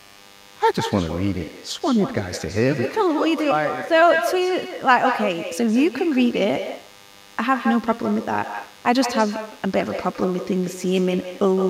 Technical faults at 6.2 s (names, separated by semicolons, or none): DECT cordless phone buzz; echo with no canceller